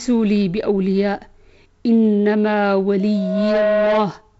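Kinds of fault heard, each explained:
Loudspeaker feedback squeal, from 3.00 s to 4.13 s: a microphone is picking up the loudspeaker it feeds, and at 634 Hz the gain around that loop exceeds one, so the tone feeds on itself. It grows over about half a second into a steady squeal that reaches roughly the level of the speech and holds until it stops at 4.13 s, above speech limited to about 7.7 kHz, consistent with G.722 wideband coding.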